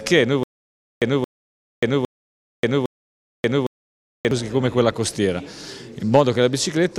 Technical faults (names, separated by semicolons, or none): stutter with silent gaps